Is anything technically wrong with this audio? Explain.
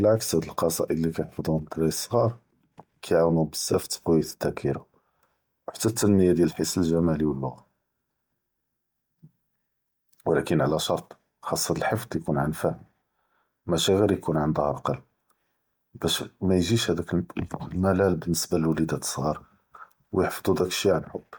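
Yes. Throughout the speech there is plainly audible codec damage, likely from Bluetooth LC3 compression: high frequencies turn breathy and grainy where the codec replaces discarded upper spectrum with noise fill. The band still extends to about 20.2 kHz, so this is texture damage rather than a band limit. The damage fits roughly 48 kbps with 10 ms frames.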